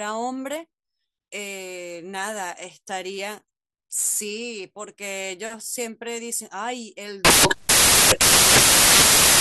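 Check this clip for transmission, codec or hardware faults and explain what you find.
One fault is present. From 7.25 s to the end at 9.40 s, the speech gives way to samples built from the wrong bytes. Each sample's bytes are combined out of order or misaligned. The noisy low bits dominate, producing loud, harsh noise close to white on the louder speech.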